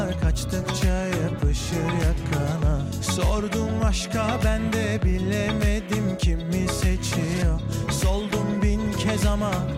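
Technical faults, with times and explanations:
No technical faults can be heard in this clip.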